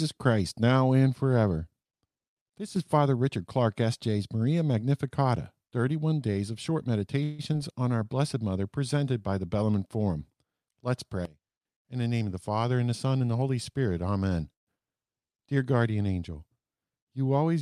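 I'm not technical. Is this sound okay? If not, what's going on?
No, the recording has several call faults.

Sudden gain jump, at 2.58 to 2.76 s and 11.25 to 11.65 s: the volume setting was likely changed in one instant instead of gradually. The speech and background noise drop together, less the first time and much more sharply the second.

Call audio freeze, at 7.23 to 7.41 s and 14.53 to 14.69 s: parts of the call were likely held up on the way, so the receiver ran out of audio. The first time it stretched the last sound into a brief fading buzz or hiss. The second time it went almost silent. Speech then resumes where it stopped, so nothing is lost but a pause is added.

Short concealed packet loss, at 7.53 to 7.56 s and 14.79 to 14.82 s: tiny pieces of the call never arrived in time. The receiver covered each hole by imitating the previous sound, heard as a quick smear or wobble just after each freeze.

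Jitter buffer speed-up, at 12.06 to 13.43 s: audio had piled up, so the receiver trimmed small slices to catch up, around 150 ms in total. The speech runs about 11% faster at the same pitch and sounds hurried.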